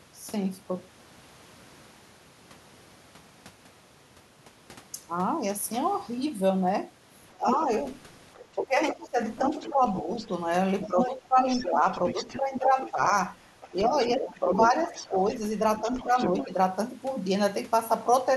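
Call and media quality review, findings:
Speech suppressed in double talk: brief dip at 7.36–7.51 s, around 20 dB, then scattered shallower dips 8.55–16.5 s, likely the echo canceller ducking everything when it can't separate talker from echo.

Other side's voice leaking through: far-end voice audible 7.48–16.48 s, roughly 10 dB under the talker, likely residual echo the canceller didn't fully remove.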